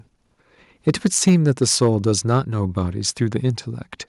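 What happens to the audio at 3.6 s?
Nothing goes wrong at 3.6 s; the speech continues intact through that moment with no audible fault.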